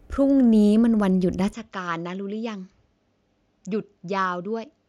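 At 1.53 s the speech abruptly turns duller and drops in level by roughly 10 dB, with no gap at the change, and stays that way to the end. From that point nothing is left above 7.6 kHz, and a faint new background noise sits far below the speech, around 50 dB down. This is most likely an input switched to a poorer device mid-recording, whose narrower band, lower gain and own noise floor replace the original microphone's.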